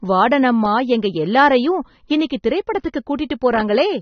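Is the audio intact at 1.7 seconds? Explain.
No. At 1.7 seconds the speech carries AAC compression, present throughout the clip: nothing reaches above about 6.3 kHz, and the damage is plainly audible, which fits a likely low-bitrate AAC-LC encode of around 27 kbps, where a lowered cut-off leaves sibilants dull and smeared.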